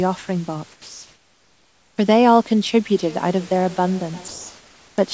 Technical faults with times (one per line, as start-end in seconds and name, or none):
0.72-1.98 comfort noise in place of the background
2.92-4.65 feedback echo between two devices